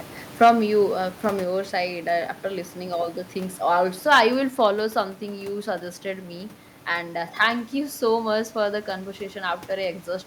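From 0.42 to 0.5 s the loudest peaks crackle harshly, likely microphone overload: driven about 5 dB past full scale, roughly a tenth of samples flatten into squared-off waveform tops, with broadband smear on the spectrogram. At 0.44 s the level abruptly falls about 2 dB, likely the microphone volume stepped down by the call software, a clean step in the waveform envelope. After "you uh from", at 1.44 s, a second step drops about 3 dB. After "all the things also", from 4.11 to 4.2 s, clipped crackle recurs, about 5 dB over, with some 5% of samples flat-topped. At 4.5 s, just before "follow something you suggested", the level steps down again, about 4 dB, lowering the room noise, which sits about 20 dB beneath speech, along with it. From 7.41 to 7.47 s a milder overload, about 2 dB over, squares off only around 1.5% of samples, leaving faint vertical streaks.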